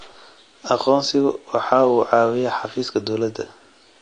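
From start to finish the speech sounds like AAC compression, likely AAC-LC at a low bitrate, something near 32 kbps. Nothing gets through above 9.8 kHz, so it's dull, and the coarse quantisation leaves a smeared, warbly fizz on sustained sounds and sibilants.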